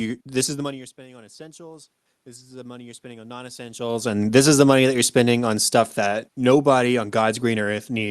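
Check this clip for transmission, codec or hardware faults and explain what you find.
Two gain-control faults stand out. Both come from the automatic gain control reacting to the talker moving. Around 0.5 s and again near 3.5 s the voice shifts in level at the microphone, as a talker leaning away and then closer would. Room noise sits underneath throughout. The audio also has the band-limited character of an Opus call path, with nothing audible above about 12 kHz.

Automatic gain rising, 0.63 to 3.91 s: After the voice drops by about 21 dB at the microphone, the gain control decides the input is too quiet. It ramps its gain up by about 8 dB over roughly three seconds. Because the gain applies to everything the microphone picks up, the room noise climbs together with the voice. The result is a slow swell that only partly restores the lost level.

Automatic gain falling, 4.21 to 7.71 s: Once the talker comes back closer, the boosted gain leaves the input too loud. 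The gain control then backs off by about 5 dB over some three and a half seconds. The voice sinks gradually after the return. The background noise drops along with it, so the whole sound fades rather than just the voice settling.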